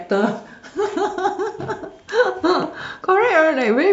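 No technical faults can be heard anywhere in the speech.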